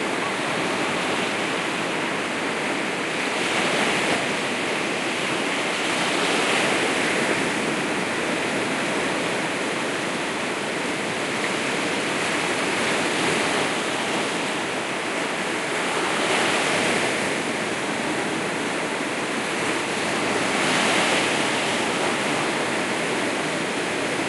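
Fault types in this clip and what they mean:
No technical faults are audible in this recording of sounds.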